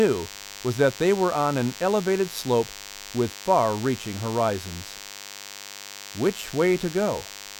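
A thin, steady buzz at 100 Hz, rich in harmonics, runs beneath the speech from start to finish, sitting roughly 15 dB below it. This is DECT cordless phone buzz: a nearby handset or base station emits a radio burst every 10 ms, which the audio circuitry rectifies into sound.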